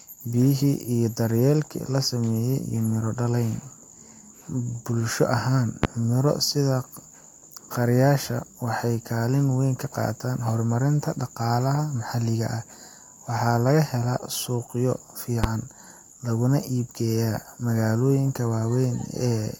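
A loud pop at 5.84–5.87 s and a softer one at 15.44–15.47 s each jump well above the speech, likely voltage spikes; unlike a dropout, the speech continues underneath.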